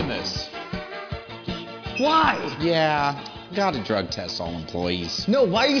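Nothing here needs flagging: the sound comes through without any audible technical problem at any point.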